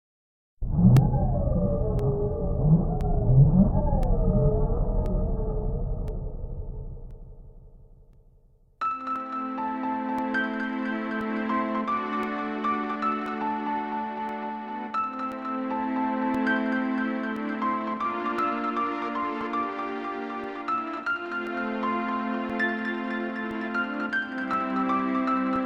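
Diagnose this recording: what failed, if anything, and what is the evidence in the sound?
Periodic USB or driver dropouts at the driver stage. Ticks recur every 1.02 s from 0.97 to 25.56 s. Each time, a couple of milliseconds is lost to silence.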